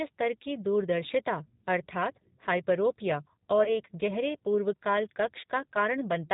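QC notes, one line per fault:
Throughout, G.729 codec: the 8 kbit/s speech is rebuilt from a vocal tract filter, a pitch predictor and a few pulses per frame, so it sounds rough and synthetic. A spectrogram shows nothing above 4 kHz, with smeared, slightly blocky harmonics.
3.64 to 3.75 s, VoIP packet loss concealed by the speech codec: about 20 ms of audio went missing, which fits a single lost packet. The decoder stretched its last pitch and filter into a fading buzzy tone or coloured noise, and the speech stays weak until about 3.75 s. The waveform shows a repetitive, shrinking envelope, and the spectrogram shows flat, frozen harmonics.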